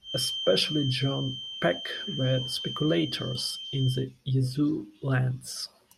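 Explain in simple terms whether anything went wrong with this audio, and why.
Something did go wrong. A thin, steady whistle near 3.1 kHz sits behind the speech from the start until about 4.09 s. It stays quieter than the talking. This is a feedback whistle, likely caused by a loudspeaker feeding back into the microphone without quite running away.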